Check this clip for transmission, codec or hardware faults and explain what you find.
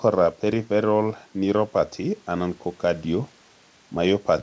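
I find no transmission, codec or hardware faults in this clip.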